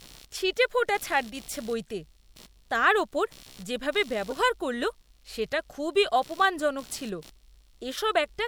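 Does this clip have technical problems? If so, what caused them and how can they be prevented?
Yes. Computer activity noise runs through the whole clip. It is a faint buzz pulsing at around 70 Hz, roughly 30 dB below the speech. Processor, graphics or mouse load shifts the shared ground of the audio circuit. Prevent it with a ground-isolated or external USB interface.

A corrupt frame decoded at 4.30 to 4.33 s. It comes after "তার ওপর যেভাবে" and before "করল সেটা খুবই অপমানজনক". It is a brief chirp peaking near -20 dBFS. Flipped bits made the decoder put energy at wrong frequencies. Prevent it with error detection and concealment of damaged frames.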